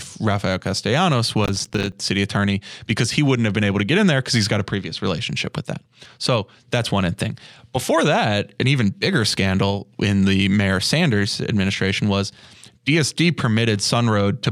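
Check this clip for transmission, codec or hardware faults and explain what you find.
There's one fault here, a burst of processor overload crackle from about 1.45 to 1.93 s, just before "city attorney because he". For about half a second the processor couldn't finish its audio buffers in time and kept missing deadlines, each miss dropping a short hole of silence into the speech. The gaps seem to fit buffers of around 5 ms, with roughly twenty missed. Their hard edges add up to a gritty tearing crackle over the speech that clears once the load eases.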